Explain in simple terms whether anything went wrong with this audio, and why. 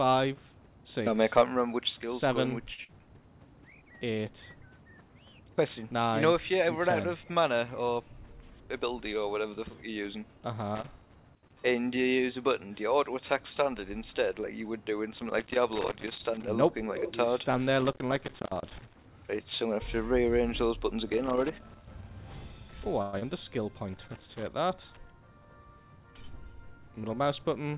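A short stall from a late packet comes first, at 2.74 to 2.80 s. One piece of the audio stream arrived late, so the receiving end had nothing ready to play. It held the last bit of sound for about 37 ms until the piece turned up, then carried on from exactly where it stopped. Nothing is lost there, but the sound is stretched for a moment.

A burst of packet loss follows right after, at 2.84 to 2.90 s. This time pieces of audio never arrived in time. The receiver covered a gap of about 47 ms by continuing the last sound and letting it fade, then jumped ahead. About 40 ms of the original audio is gone.

Loose connector crackle appears five times: 10.75 to 11.61 s, 15.17 to 16.48 s, 17.80 to 19.08 s, 21.10 to 22.14 s, and 23.93 to 24.48 s. A worn or dirty plug or socket keeps touching and losing contact. Each break chops the signal, giving bursts of irregular crackling and scratching rather than a steady noise.

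A longer gap occurs at 23.02 to 23.24 s. About 200 ms is filled with the last sound fading away rather than true silence, and about 100 ms of the original audio never plays. The audio then resumes a little further on, with the delay shifted by roughly 40 ms. This is likely a long network dropout, where the connection delivered nothing for a stretch.

Throughout, the sound carries nothing above 4 kHz, which is normal for the telephone-style codec this call used.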